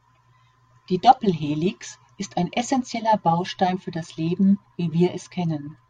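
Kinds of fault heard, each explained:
No kinds of fault are heard in this speech clip.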